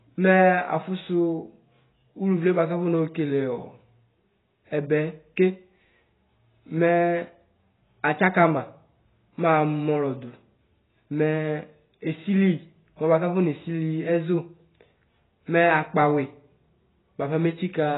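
Heavy, dull band-limiting runs through the whole of this speech recording, with nothing audible above about 3.9 kHz, so sibilants lose their edge and turn smeared and fizzy, while sustained vowels carry a watery warble. This points to AAC compression, most likely AAC-LC at a very low bitrate around 16 kbps: the encoder starves its frames of bits, drops the top of the spectrum entirely and quantises what remains so coarsely that holes and swirling artefacts appear.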